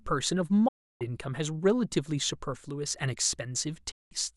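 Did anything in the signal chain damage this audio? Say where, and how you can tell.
Yes, a digital broadcast dropout: the receiver lost frames and muted. Speech fades out within about 8 ms and returns later, losing 0.68 to 1.02 s and 3.91 to 4.12 s, holes that fit whole lost frames rather than a gradual signal fade.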